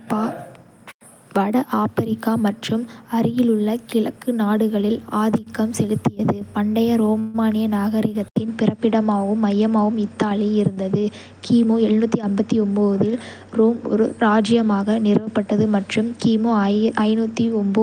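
At 7.19 s packets were likely held up and the jitter buffer ran dry, a call audio freeze. About 146 ms of fading buzz fills the gap until 7.47 s, then the sound resumes where it stopped.

At 8.28 s the input likely switched to a poorer device. After an 80 ms silence, nothing remains above 9.1 kHz and a faint new noise floor appears, at much the same level, through the end.

From 11.64 to 12.89 s a jitter buffer speed-up trims short pitch-period pieces, roughly 150 ms in all. The sound runs at 112% speed with unchanged pitch and feels hurried.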